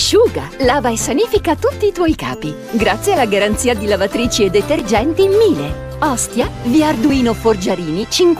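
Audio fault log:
1.56–8.03 s, clock drift buffer slips: a clock mismatch of roughly a tenth of a percent between two devices is the likely cause, forcing a few tens of samples to be dropped or repeated every 1.63 s and producing about five regular clicks.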